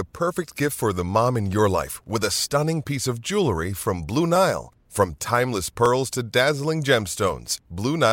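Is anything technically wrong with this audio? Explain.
Yes, there are clock drift buffer slips. From 1.35 to 7.36 s, just after "gift for the mom", about five regular clicks land every 1.5 s. Likely two clocks a couple of hundred ppm apart, so the buffer drops or repeats a small block of samples each cycle.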